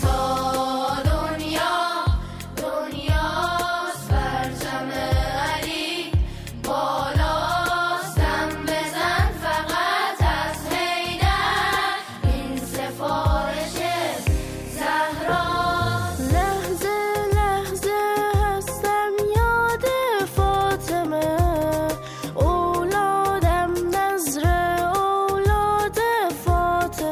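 No technical faults can be heard anywhere in the recording. The audio runs without a break or disturbance in the signal.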